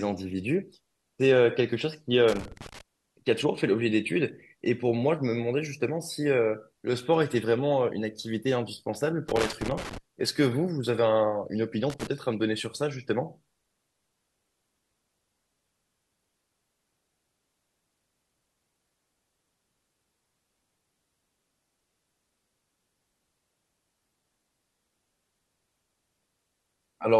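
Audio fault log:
2.28–2.81 s, 9.28–9.98 s and 11.90–12.07 s: loose connector crackle. Irregular bursts of scratchy crackle break up the speech as a worn contact makes and breaks, chopping the signal.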